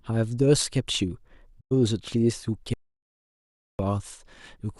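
At 1.59 s there's a digital broadcast dropout: the receiver lost a run of frames, about 96 ms here, which fits four frames, and muted with a quick 20 ms fade until clean frames returned at 1.73 s. Then from 2.74 to 3.79 s comes an audio dropout to silence, just over a second of silence with no room tone, likely from the input feed dropping out while recording carried on.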